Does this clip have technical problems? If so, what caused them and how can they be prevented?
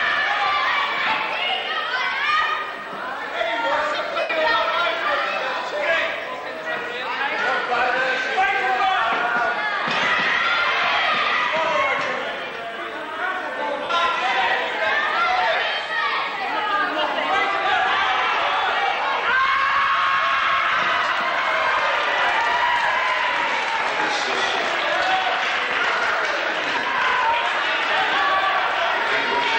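Yes. Lost LE Audio frames at 4.20 s (about 98 ms), 13.84 s, 15.56 s, 21.04 s and 26.79 s (about 38 to 53 ms each), consistent with 7.5 ms LC3 frames, made the decoder repeat the last spectrum with scrambled signs, smearing tones into brief noisy washes. Keeping the devices close, with a clear path and less 2.4 GHz congestion, would prevent these dropouts.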